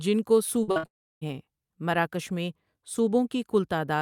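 At 0.63 to 0.69 s and again at 0.71 to 0.78 s comes short concealed packet loss: each time about 40 ms of speech went missing and the decoder patched it by extending the preceding sound. It heard as a brief smear or wobble; the spectrogram shows smoothed, repeated detail instead of fresh detail.

Straight after, from 0.78 to 0.85 s, a burst of packet loss removes about 60 ms. The last sound is stretched and turned down, so the held sound fades out; the waveform's envelope decays smoothly and the spectrogram shows frozen, dimming bands.

From 0.85 to 1.23 s a long network dropout, the likely cause, leaves about 360 ms unplayed. A short fading continuation gives way to roughly 320 ms of silence, a flat waveform and an empty spectrogram, before speech resumes further on with that stretch gone.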